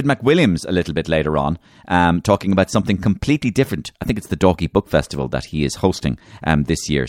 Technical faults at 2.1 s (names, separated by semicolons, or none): none